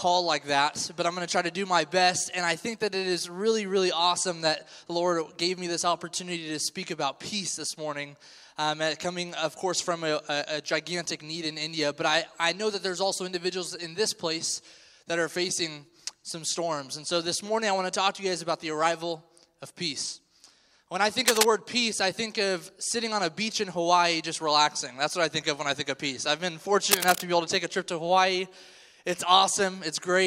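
Bursts of cable scratch noise at 21.26–21.45 s and 26.91–27.26 s, roughly level with the sound or louder, likely from a worn connector being moved.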